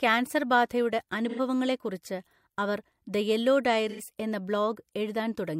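At 1.29 to 1.39 s and again at 3.89 to 4.00 s, the speech turns briefly smeared and phasey. This is AAC frame loss with concealment. About 85 ms vanished each time, which fits two lost frames, and the decoder rebuilt it from the preceding spectrum. A spectrogram shows blurred, harmonic-less smudges there.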